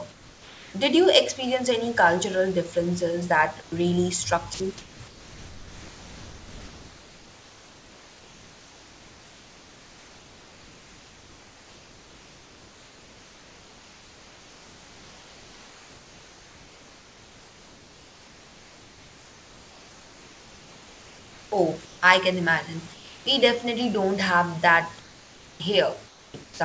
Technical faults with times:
0.12-0.74 comfort noise in place of the background
3.62-3.72 comfort noise in place of the background
4.54-4.60 sound dropped by the voice detector
4.54-22.02 comfort noise in place of the background
22.94-23.26 comfort noise in place of the background
25.00-26.60 comfort noise in place of the background
26.44-26.60 sound dropped by the voice detector

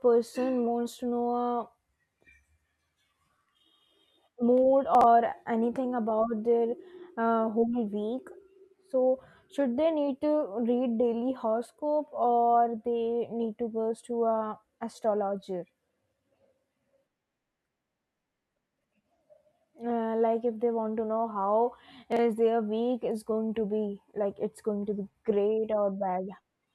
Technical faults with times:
4.95-5.03 chunks out of order
22.12-22.19 chunks out of order

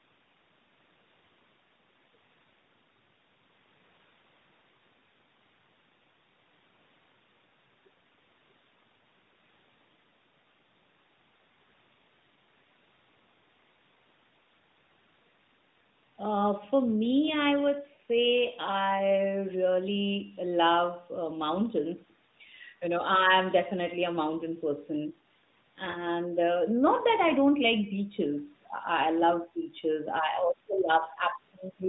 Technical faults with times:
17.94-18.00 lost AMR speech frames
25.92-26.03 lost AMR speech frames

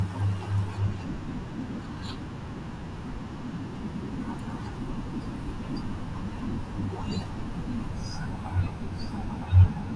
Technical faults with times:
7.92-9.96 wrong sample rate

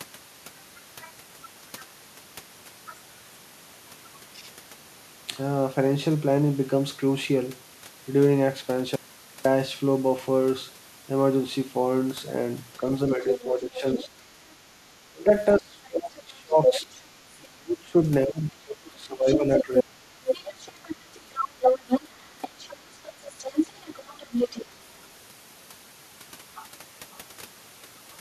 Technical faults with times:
8.96-9.45 audio dropout to a faint residue
13.16-19.97 speech suppressed in double talk
13.22-14.05 other side's voice leaking through
16.66-16.99 other side's voice leaking through
18.87-24.66 other side's voice leaking through
20.74-21.30 speech suppressed in double talk
22.04-22.09 speech suppressed in double talk

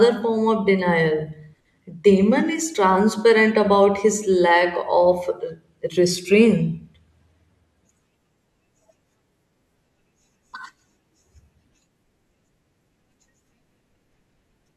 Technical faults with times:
none

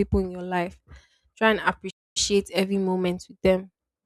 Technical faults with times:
1.90-2.17 playback stall

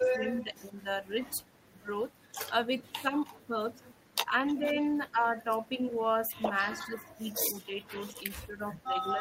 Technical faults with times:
0.14-0.85 speech suppressed in double talk
0.41-0.56 echo leak
2.89-5.20 speech suppressed in double talk
6.75-7.26 speech suppressed in double talk
7.88-9.21 speech suppressed in double talk

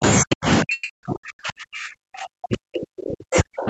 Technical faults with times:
0.00-3.69 mains buzz
0.21-3.69 speech suppressed in double talk
0.73-0.91 long network dropout

